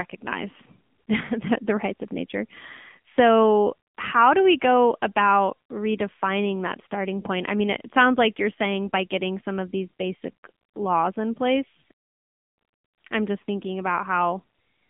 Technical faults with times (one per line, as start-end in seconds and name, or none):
0.00-14.89 AMR narrowband mobile codec